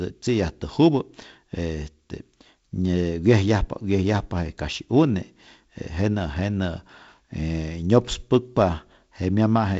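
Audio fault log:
Nothing to log here: the speech comes over what sounds like a G.722 wideband phone link, probably running at 48 kbit/s, with nothing above about 7.7 kHz, which is just how that kind of line sounds.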